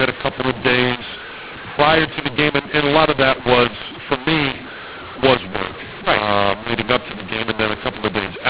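A mu-law and A-law mix-up runs throughout: speech coded with mu-law G.711 is decoded as A-law, scrambling sample levels. Speech turns harsh and distorted, quiet samples jump well above silence so pauses fill with noise, all within the telephone band's 4 kHz ceiling.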